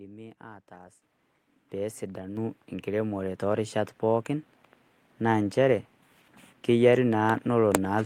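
At 1.02 s and again at 2.37 s, just before "enkiremore toorishat pookin", the microphone volume is stepped up, by about 10 dB and then about 5 dB. Speech and background noise jump together, and the waveform envelope and the whole spectrogram brighten abruptly at each step.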